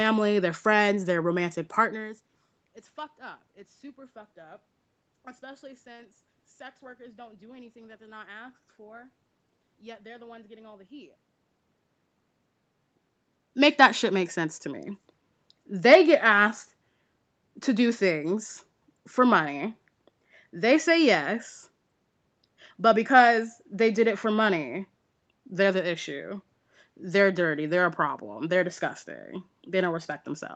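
No technical faults are audible.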